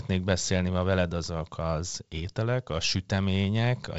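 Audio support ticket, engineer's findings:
Findings: no faults found in this speech, which carries G.722 wideband telephone coding at 56 kbit/s with nothing above 7.7 kHz.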